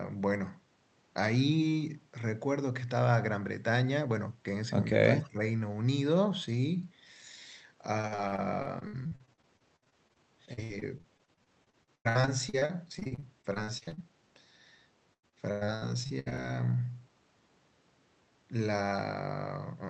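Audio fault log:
5.13 to 5.4 s, speech suppressed in double talk: the speech dips by roughly 15 dB for about a third of a second and sounds ducked. The likely cause is an echo canceller that couldn't tell its own talker from the loudspeaker echo while both sides spoke, so it pulled everything down.
8.01 to 13.99 s and 15.13 to 16.40 s, repeated packet loss (robotic sound): a long choppy stretch, then a shorter one, with holes coming thick and fast, each under about 100 ms. Every gap gets patched by stretching the last bit of sound, so with a quarter to a third of each stretch concealed it turns choppy, with chunks missing.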